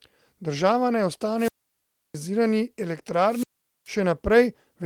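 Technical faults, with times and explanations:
1.36–2.17 s and 3.25–3.91 s, wireless microphone squelch dropout: In both places the radio link from the microphone fades. Hiss and static rise briefly, then the receiver's squelch shuts the output off. That leaves a hole of near silence lasting about 0.67 s in the first event and about 0.43 s in the second. Once the signal recovers, the squelch reopens and the speech returns. Beneath these gaps, the light coding damage of the Opus coding at 24 kbps carries on.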